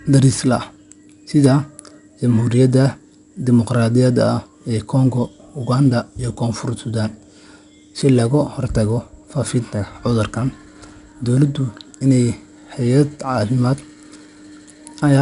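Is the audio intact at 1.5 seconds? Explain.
No. From 1.44 to 1.47 s, just before that point, hard clipping cuts the peaks flat where the signal overdrives a stage by about 2 dB. It is heard as a brief crackle, seen on the waveform as squared-off tops and on a spectrogram as a thin vertical smear of harmonics reaching high up.

4-bit ADPCM compression is also present at 1.5 s and throughout. Each sample is coded as a coarse 4-bit step from a prediction, leaving gritty hiss that rises and falls with the speech, distortion on sharp attacks, and nothing above 10.6 kHz, consistent with roughly 89 kbps. A spectrogram shows a level-following noise haze and a hard ceiling at 10.6 kHz.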